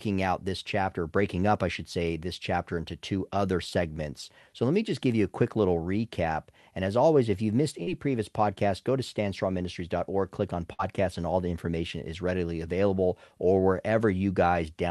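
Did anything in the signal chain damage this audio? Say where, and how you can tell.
Yes. A short concealed packet loss, a network-stage fault, occurs at 7.83 to 7.89 s, between "always if you've missed" and "previous podcast go to". About 40 ms never arrived, and the decoder bridged it by extending the preceding sound before blending back, leaving a brief smear.

A burst of packet loss follows at 10.73 to 10.81 s, after "click on" and before "and all the information". Roughly 60 ms went missing in a row. The receiver continued the last sound while fading it, so a held, dying tail replaces the lost stretch.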